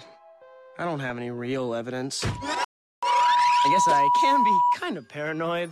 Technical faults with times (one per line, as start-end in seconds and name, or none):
2.19-4.76 loudspeaker feedback squeal
2.64-3.03 rebuffering stall